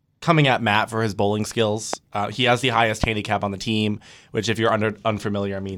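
A likely electrical transient, such as a sudden voltage step from a switch, connector or static discharge, twice breaks into the speech chain, producing a loud pop from 1.93 to 1.96 s and another from 3.04 to 3.06 s. Each is a single short burst that jumps roughly 15 dB above the speech level, heard as a sharp click-thump laid on top of the talking, which continues uninterrupted beneath both pops.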